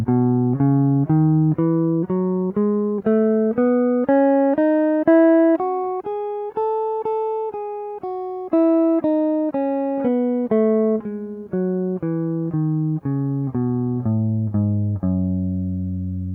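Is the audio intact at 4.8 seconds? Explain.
Yes, the music plays through 4.8 seconds without any audible dropout, click, distortion or other fault.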